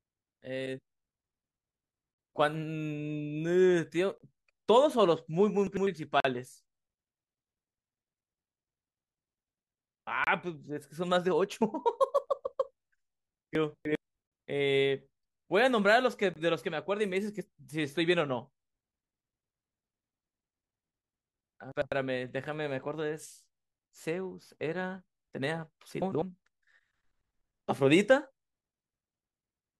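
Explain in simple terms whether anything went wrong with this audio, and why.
The speech cuts out for a split second, like a tiny hard-edged hole, at 4.18–4.21, 6.20–6.25, 10.24–10.27, 12.27 and 16.34–16.36 seconds. These are gaps between stream segments: the audio arrives in two-second pieces whose timing doesn't quite line up, and the player fills each gap with silence. Nothing is lost.

Four moments sound briefly jumbled: 5.67–5.87, 13.55–13.95, 21.72–21.92 and 26.02–26.22 seconds. These are chunks out of order. A short slice of audio arrived late and was played after the slices meant to follow it, scrambling the sequence.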